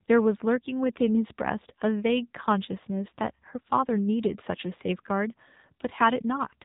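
From start to end, AMR narrowband mobile codec damage: speech sounds buzzy and synthetic, consistent with a low bitrate around 7.4 kbps, and a spectrogram shows everything above 3.8 kHz simply missing.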